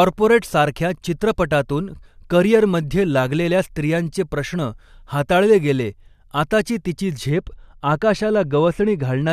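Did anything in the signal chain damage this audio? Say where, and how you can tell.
Yes, de-emphasis applied wrongly at 7.29 to 9.29 s in processing: an unneeded treble cut slopes the speech about 11 dB down at 10 kHz, so it sounds muffled.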